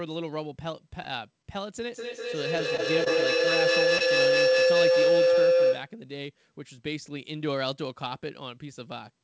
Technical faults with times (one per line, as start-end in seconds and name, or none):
1.42-1.46 short stall from a late packet
1.90-6.01 feedback howl
3.04-3.08 short concealed packet loss
3.98-4.02 short concealed packet loss